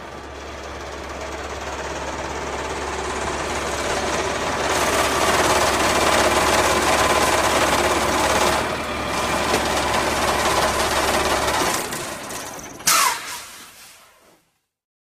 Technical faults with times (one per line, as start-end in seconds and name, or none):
10.10-15.13 call bitrate drop